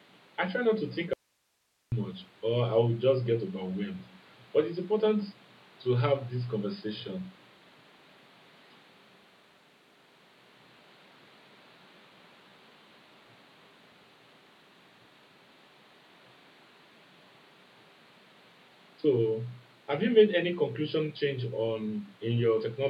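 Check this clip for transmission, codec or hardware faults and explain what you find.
One transmission fault stands out: an audio dropout to a faint residue from 1.13 to 1.92 s. The speech signal was likely lost upstream while the path after the break stayed live, so for about 0.79 s the speech cuts off abruptly and only hiss remains, roughly 45 dB below the speech.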